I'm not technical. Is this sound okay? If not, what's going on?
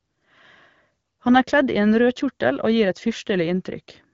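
Yes, nothing stood out on listening to this speech, which sounds like an ordinary HD Voice phone call.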